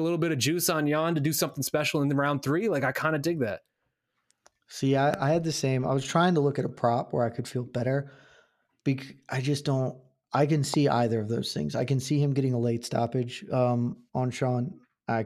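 A sharp single pop lands at 5.14–5.16 s and another at 10.74–10.76 s, each standing well above the speech, which carries on underneath. These loud pops are likely caused by a brief electrical pulse from a switch, plug or static.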